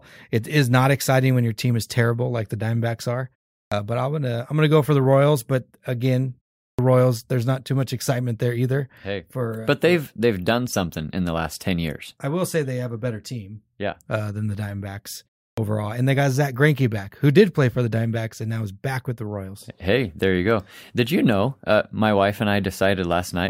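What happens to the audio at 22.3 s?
At 22.3 s the speech is intact, with nothing dropped, distorted or glitched at that point.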